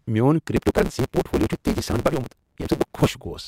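Speech, with a block size mismatch (truncated) from 0.56 to 3.08 s. A steady buzz near 138 Hz sits under the speech, and delivery runs about 1.6 times fast with its timbre kept. Each block's tail is dropped, which fits 512-sample blocks read short.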